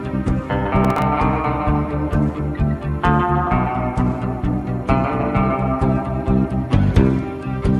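From 0.85 to 1.02 s the processor falls behind its audio deadlines, producing processor overload crackle. Buffers only a few milliseconds long go unfinished, and a handful are missed in close succession. Each miss replays a fragment of old audio with abrupt edges, so the sound briefly stutters and tears. The result is a short gritty crackle laid over the sound, lasting under a fifth of a second before the load clears and it stops.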